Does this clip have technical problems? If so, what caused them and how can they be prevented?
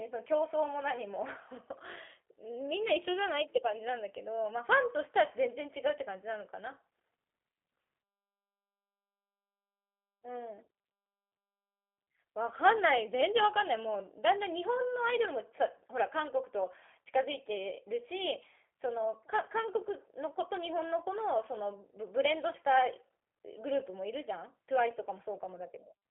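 Yes. G.729 codec damage runs throughout: the speech sounds rough and synthetic because each 10 ms frame is rebuilt from a vocal tract filter, pitch predictor and a few pulses, which fits an 8 kbit/s G.729A link, and the band stops near 3.4 kHz. Prevent it by carrying calls over a wideband, higher-bitrate codec instead.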